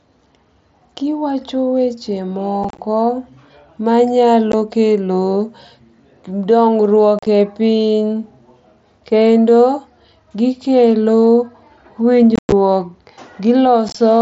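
Voice packets between the headset and phone were dropped with nothing to conceal them, the unconcealed Bluetooth headset packet loss, so silence replaced the audio at 2.64 to 2.79 s (about 75 ms lost across 150 ms), 4.52 s, 7.19 to 7.27 s, 12.36 to 12.52 s (one 105 ms run) and 13.89 to 13.95 s. Each loss cuts abrupt holes into the wideband mSBC speech, and the scattered clusters sound chopped and crackly rather than like one clean gap.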